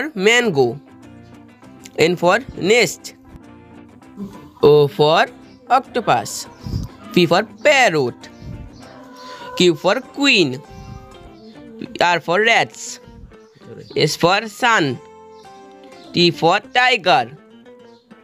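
No technical faults are audible.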